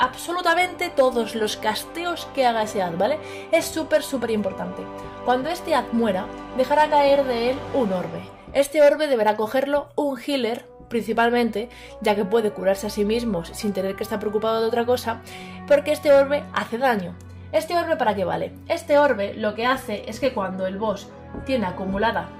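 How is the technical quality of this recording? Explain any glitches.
Nothing here counts as a glitch; the recording runs along without any dropouts, clicks, or other technical hiccups worth flagging.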